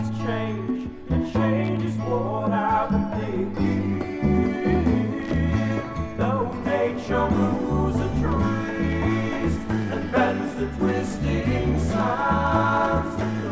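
There are no technical faults to describe in this audio.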